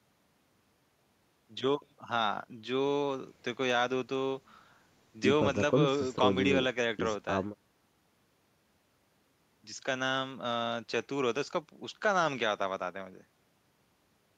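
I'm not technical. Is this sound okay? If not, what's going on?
Yes, this speech recording is fine. Nothing in it points to a technical problem.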